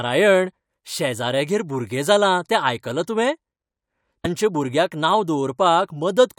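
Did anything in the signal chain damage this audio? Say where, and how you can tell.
Yes. A broken MP3 bit reservoir, likely at the codec stage, shows at 4.24 to 4.26 s, just before "भुरग्याक नांव": the audio skips forward with a brief glitch. Frames were lost, and the next frame borrowed reservoir bytes that belonged to another frame, which fits 24 ms MP3 frames.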